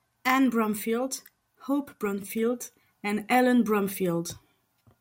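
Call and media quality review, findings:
CD scratch ticks in speech, 2.05–2.39 s: three brief clicks, each a couple of milliseconds at most. Disc blemish exceeding error correction once per revolution; player interpolating or muting damaged samples.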